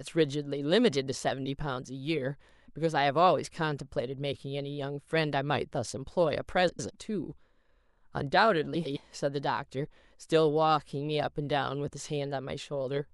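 Speech, with frames out of order twice, at 6.69 to 6.90 s and 8.75 to 8.97 s. Each time, two adjacent blocks of about 105 ms play swapped, which fits runs of four frames, so you get a garbled flutter, though no time goes missing.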